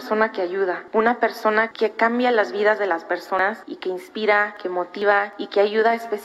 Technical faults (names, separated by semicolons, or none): dropped buffer (overrun)